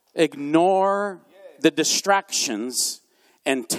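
No technical faults can be heard anywhere in the speech.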